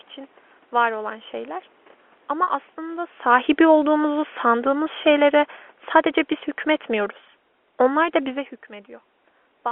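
At 2.43 s, for about 40 ms until 2.47 s, packet loss with pitch repetition briefly holds the speech on a slightly buzzy, frozen tone. The gap fits four lost 10 ms packets, which the receiver filled by repeating the last pitch period. On a spectrogram the harmonics run flat and unchanging across the gap, and the waveform shows identical repeated cycles.

From 3.25 s to 5.52 s the automatic gain falls. The control judged the input too loud, or its background noise too strong, and lowered its gain by about 5 dB, so the speech and the room noise behind it sink together. The waveform envelope tapers steadily, and on a spectrogram the background darkens along with the speech.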